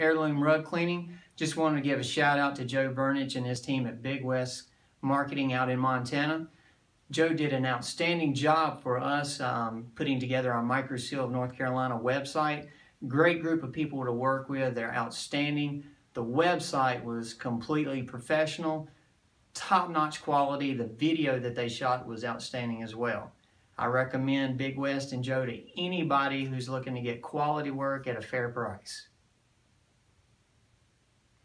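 No technical faults can be heard anywhere in the recording. Nothing breaks into or disturbs the audio at any point.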